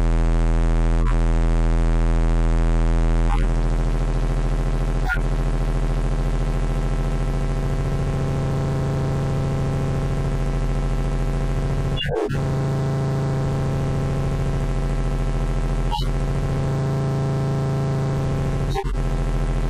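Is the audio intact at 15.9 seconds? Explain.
No. A corrupt frame decoded fault runs from 15.91 to 16.07 s. Flipped bits in the compressed data reached the decoder, which played the damaged frames anyway. Misread gains and codes put energy at frequencies that don't belong to the sound. Across this 0.16 s span, roughly three frames long, that comes through as a burst of chirpy noise cutting across the sounds, with the error peaking around -10 dBFS.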